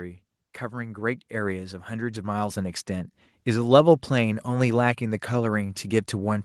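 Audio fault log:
0.70–2.85 s, automatic gain rising: the speech and the background noise behind it swell together, growing steadily louder by about 8 dB over roughly two seconds. The automatic gain control judged the input too quiet and gradually raised its gain.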